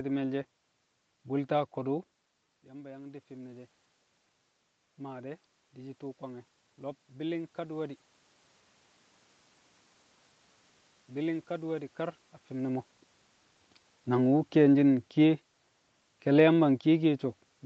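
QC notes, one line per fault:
2.69–3.78 s, automatic gain rising. The input falls by about 14 dB as the talker moves away from the microphone, around 2 s. The gain control hears a too-quiet input and slowly turns itself up. It adds about 4 dB over roughly a second. The voice and the room noise swell together, because the gain lifts everything the microphone picks up. The rise is gradual, so it sounds like a slow fade-up.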